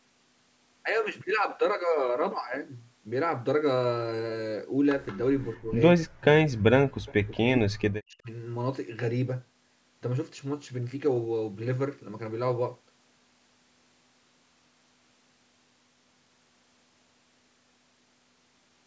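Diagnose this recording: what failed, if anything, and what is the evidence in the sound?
The far end's echo canceller likely left residual echo uncancelled at the call-processing stage, so an echo leak reaches the recording. At 5.07 to 5.17 s and again at 7.06 to 7.13 s, a faint delayed copy of the speech appears, trailing by 178 ms and sitting roughly 25 dB below the direct signal. The loudspeaker-to-microphone path was not fully modelled, so a brief ghost of the talker was sent back.

Speech suppressed in double talk is the second failure, again in the call's echo processing. With both sides active, the canceller likely mistook the near talker for loudspeaker echo and attenuated everything. The speech drops by about 15 dB at 5.62 to 5.71 s, then by around 40 dB, enough to vanish, at 5.97 to 6.25 s, 6.47 to 6.66 s, 7.27 to 7.44 s and 7.61 to 8.29 s. The longest gap lasts close to three-quarters of a second.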